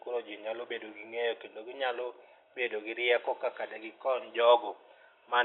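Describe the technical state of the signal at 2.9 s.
At 2.9 s the speech signal is intact, with only the room's own background noise sitting far beneath it, about 52 dB below the speech.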